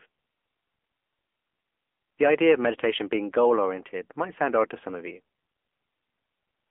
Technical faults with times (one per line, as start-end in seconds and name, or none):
0.00-6.70 AMR narrowband mobile codec